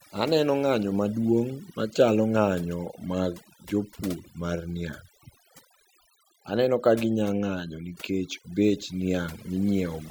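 A speech recording whose noise reduction was pushed far too hard throughout: the processor cuts individual frequency bands whenever they approach its noise estimate, removing quiet vocal detail too. The background drops away and breaks up into twinkling artefacts.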